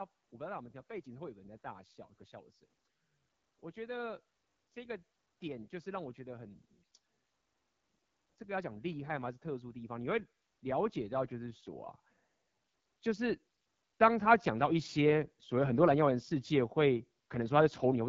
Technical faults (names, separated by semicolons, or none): AMR wideband (HD Voice) codec; automatic gain rising